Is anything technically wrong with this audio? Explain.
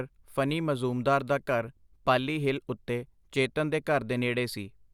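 No, nothing technically wrong can be heard here.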